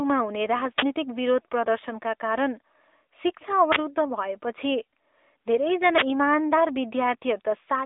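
From start to end the speech carries the sound of an AMR narrowband mobile codec. The audio is confined to a telephone band of roughly 300 Hz to 3.6 kHz, and nothing passes above 3.8 kHz, so sibilants lose their hiss. The codec rebuilds the voice from a vocal-tract model excited by sparse pulses, and at a rate that fits a mid-level mode around 10 kbps the damage is plainly audible as a buzzy, synthetic edge. A spectrogram shows a flat ceiling near 3.8 kHz and little energy below 300 Hz.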